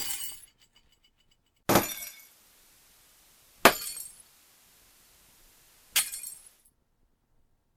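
At 1.65 s the receiver loses digital and blends to analogue FM. Faint hiss appears and the level drops about 1 dB. Digital returns at 6.68 s.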